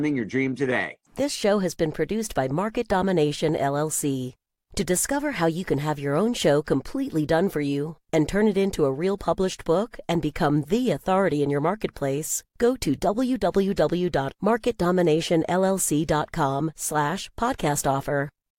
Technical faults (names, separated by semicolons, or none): none